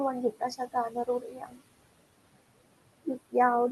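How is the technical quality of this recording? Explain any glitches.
The recording is marred by noise suppression: steady processing artifacts throughout, plus two stretches where speech itself gets pulled down.

Noise suppressor artifacts run across the whole clip: the room noise, sitting about 18 dB under the speech, is cut by about 21 dB between phrases and surfaces under them, unlike steady hiss.

Speech cut by the noise suppressor hits 0.32–0.42 s (drop of about 20 dB) and 0.58–1.61 s (about 17 dB, roughly half a second affected): quiet speech misjudged as noise sounds swallowed, not merely noisy.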